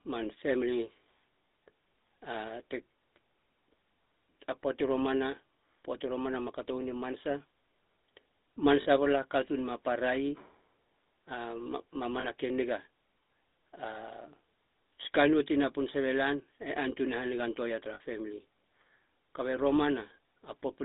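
Throughout, the speech carries the buzzy, gravelly roughness of the GSM full-rate codec, consistent with a 13 kbps stream. Its pulse-driven vocal-tract model discards fine excitation detail, and the line passes only about 250 Hz to 3.7 kHz, so the sound is thin and rasping.

Lost GSM frames interrupt the audio at 8.82 s, 12.20 s and 17.94 s, for about 40 ms, 40 ms and 60 ms. Each gap is concealed by repeating the last good frame, giving a short metallic ring in place of the missing sound.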